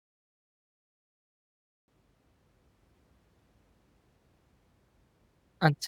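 For the first 1.88 s there is nothing but dead digital silence, and then the speech comes in abruptly, already partway through a sound, with no natural onset or build-up. That is a cut-off start: capture or streaming only got going at 1.88 s, so whatever was said before that point was never recorded, and the audio begins in the middle of an utterance rather than from a clean lead-in.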